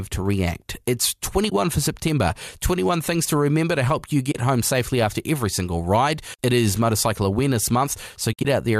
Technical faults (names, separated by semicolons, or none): AAC frame loss with muting